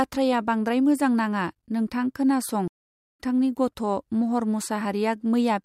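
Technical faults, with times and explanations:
2.68–3.20 s, stream reconnect: speech drops to silence for about half a second after the connection breaks, then resumes roughly 0.4 s later in the stream. A fresh decoder starts there, so the waveform shows a flat gap and a restart that fades in.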